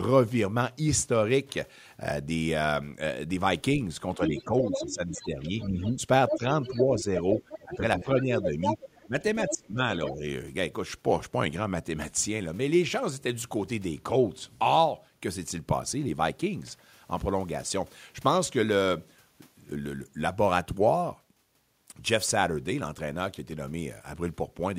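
From 4.18 s to 10.25 s the talker's level repeatedly sinks while a second voice is present, a case of speech suppressed in double talk. Over roughly three seconds in total within that span the speech dips or thins, at its deepest by around 10 dB. The likely cause is an echo canceller that could not tell the near talker from loudspeaker echo during simultaneous speech and attenuated both.

Overlapping this, the other side's voice leaks through from 4.37 s to 7.76 s, sitting around 5 dB below the talker, then again from 8.41 s to 10.12 s at roughly the same level as the talker. This is residual echo. The far voice, played on the device's loudspeaker, was likely not fully cancelled from the microphone signal and passes through in the second stretch nearly as loud as the near speech.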